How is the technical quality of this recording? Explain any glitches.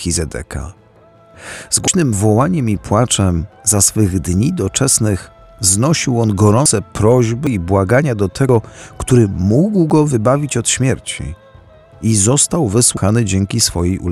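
The recording has six skips where audio goes missing. These are most likely dropped buffers (overruns): the capturing program fell behind, the hardware overwrote samples it had not yet collected, and the audio on either side was spliced together. At 1.88, 6.66, 7.47, 8.49, 9.9 and 12.97 s, each gap causes an abrupt jump forward in the sound rather than a silence. The losses at 1.88, 6.66 and 12.97 s are roughly 150 ms, the one at 7.47 s about 100 ms, and those at 8.49 and 9.9 s only a few tens of milliseconds.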